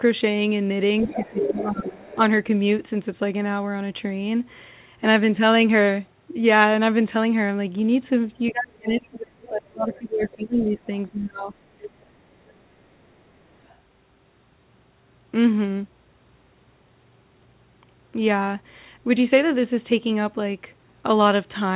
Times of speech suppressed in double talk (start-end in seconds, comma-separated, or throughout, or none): 1.18-2.19, 8.51-11.84